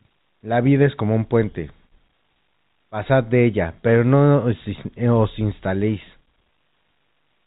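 No faults: the speech stays within the 4 kHz ceiling of G.711 telephone coding, which fits a 64 kbps A-law line, with only faint quantisation noise riding under the signal level.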